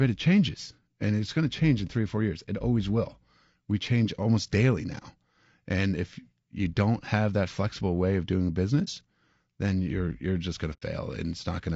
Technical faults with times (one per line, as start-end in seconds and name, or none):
0.00-11.76 low-delay AAC compression
8.84-8.88 AAC frame loss with muting
10.73-10.83 AAC frame loss with muting